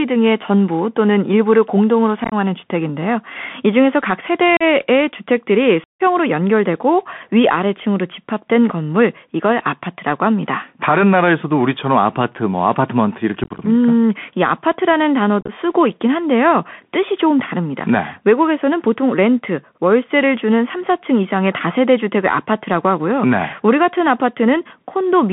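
Throughout, the speech passes through a Bluetooth CVSD headset codec, limiting it to about 150 Hz to 3.5 kHz; scratchy sibilants and granular hiss distinguish it from simple band-limiting. Unconcealed Bluetooth headset packet loss then punches abrupt holes at 2.24–2.34 s, 4.57–4.63 s, 5.84–6.01 s (about 158 ms lost), 13.44–13.60 s and 15.41–15.52 s; hard-edged gaps rather than smeared fill mark it as unconcealed.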